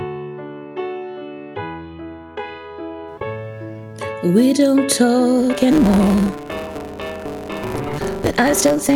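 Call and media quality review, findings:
Block size mismatch (truncated) from 5.38 s to end: writing stage outputs longer blocks than the next stage reads, consistent with a 512-sample buffer; block tails dropped. Result: 150 Hz buzz at block rate, audio running 1.6x fast at roughly normal pitch.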